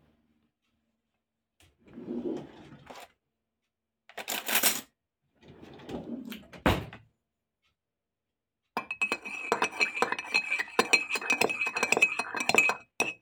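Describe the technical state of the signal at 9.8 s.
At 9.8 s the signal is intact, with no dropout, clipping, distortion or other fault audible at that moment.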